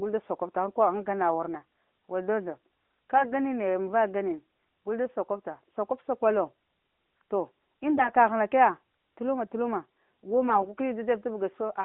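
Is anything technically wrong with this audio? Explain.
Yes. AMR bit errors at 7.94 to 8.09 s and 10.48 to 10.73 s: a few percent of the weakly protected bits in a run of frames arrived flipped, misplacing excitation pulses and skewing pitch and gain, so the speech briefly turns hoarse and gargly. This plays over narrowband mobile audio that fits AMR-NB at 12.2 kbps, with a line band of about 200 Hz to 3.5 kHz.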